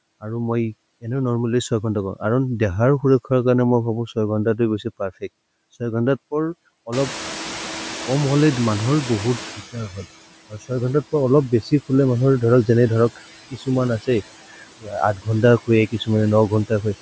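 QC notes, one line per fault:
Throughout: noise suppressor artifacts. The background is pulled down by about 16 dB frame by frame, so it dips between phrases and swells back under the speech.
6.92–10.0 s: noise suppressor catching up. The room noise jumps by about 21 dB around 7 s and first comes through with less reduction; the noise estimate needs about 3.1 s to adapt, after which the background sinks by about 14 dB.
10.5–16.09 s: speech cut by the noise suppressor, at 10.5–10.71, 13.5–13.68, 14.5–14.94, 15.15–15.27 and 15.9–16.09 s. Quiet stretches of speech are mistaken for noise and dropped by about 12 to 17 dB, mostly around a tenth of a second each, longest near 14.5 s, just before and after "गंडाई खुए", so those parts sound swallowed.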